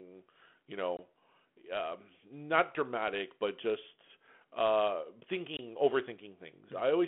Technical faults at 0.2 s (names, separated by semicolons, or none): none